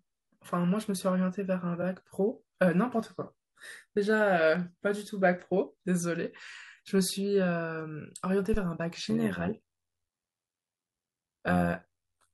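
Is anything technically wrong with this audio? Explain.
Yes, three faults. From 1.81 to 1.84 s, repeated frames: one compressed frame of 21.3 ms is played twice, causing a brief stutter and adding 21.3 ms.

From 8.54 to 8.66 s, a phantom power thump: a supply switching on a live input pushes a step through the coupling capacitors, giving a deep thump that decays within 28 ms.

From 9.10 s to the end, overlap-add ripple: windowed frames rejoin with gain that doesn't sum evenly, so the level swings by about 11 dB around 100 times a second. The result is a metallic buzz with extra tones around each note.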